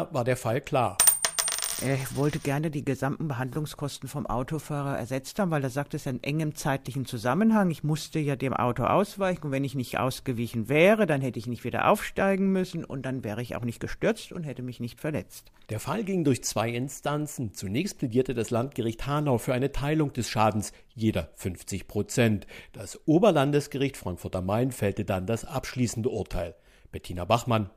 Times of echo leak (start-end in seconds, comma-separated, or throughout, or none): none